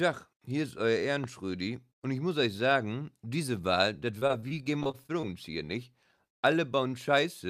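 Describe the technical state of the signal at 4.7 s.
At 4.7 s the signal sits inside a stretch of repeated packet loss (robotic sound) running from 4.19 to 5.25 s. About a dozen short holes, none longer than 24 ms, are patched by extending the preceding sound, covering roughly a quarter of the span. The rapid succession of these patches, rather than one isolated dropout, produces the choppy quality with pieces missing.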